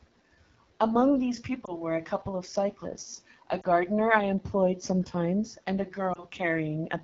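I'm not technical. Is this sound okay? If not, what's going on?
No. The whole clip is coded with the AMR wideband (HD Voice) codec at a low-quality setting, so the speech sounds rough and raspy from start to finish. Because it is constant rather than at particular moments, it comes from the phone's compression, not from dropouts.

There are also three lost AMR speech frames, at 1.65 to 1.73 s, 3.61 to 3.65 s and 6.13 to 6.24 s. Each time, a tiny piece of the signal arrived damaged, and the phone briefly guessed from what came just before, causing a short dip or wobble. Unlike the steady roughness, these are sudden, isolated blips.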